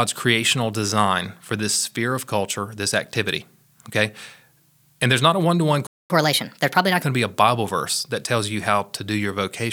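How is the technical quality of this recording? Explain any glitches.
Two linked glitches interrupt the speech after "a one to one". A playback stall silences everything from 5.87 to 6.10 s, about 230 ms; the player likely ran short of data or was blocked, and speech resumes where it stopped rather than skipping ahead. Then a catch-up at higher speed runs from 6.10 to 7.03 s, ending before "going to be a": the backlog plays 1.25 times faster, pitch rising about four semitones, unlike a pitch shift that leaves timing alone.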